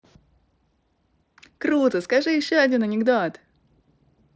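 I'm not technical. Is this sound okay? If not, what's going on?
Yes, this speech recording is in good technical shape: it has the typical sound of a Bluetooth headset's wideband mSBC codec, which carries the voice up to about 8 kHz and adds only a light grainy texture on the louder moments.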